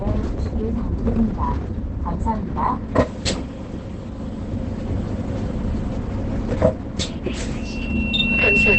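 Opus compression runs throughout this recording of sounds, with nothing present above about 8.7 kHz and the whole clip sounding muffled, hoarse and heavily degraded. The narrowed, wideband-limited spectrum and that dull, rasping texture point to the encoder having dropped into its SILK mode, which fits a very low bitrate of around 12 kbps. Starved of bits, it likely gave up the upper band entirely and roughened what remained.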